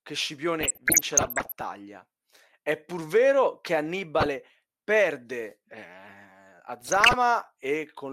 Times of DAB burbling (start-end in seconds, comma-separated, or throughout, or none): 0.61-1.61, 4.20-4.26, 6.80-7.16